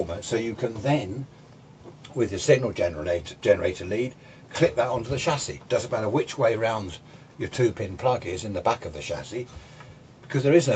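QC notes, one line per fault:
No faults heard; content above 8 kHz is absent.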